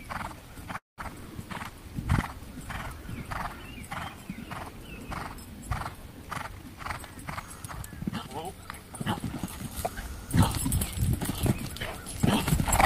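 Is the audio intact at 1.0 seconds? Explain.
No, 1.0 s is the tail end of a call audio freeze running from 0.77 to 1.00 s, likely caused by delayed packets draining the jitter buffer. About 200 ms is filled, mostly silent, before the audio resumes intact but roughly 200 ms later than it should.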